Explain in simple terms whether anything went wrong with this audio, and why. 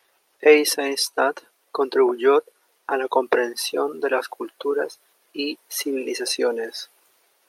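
Nothing went wrong with this audio; there are no faults to hear anywhere in it.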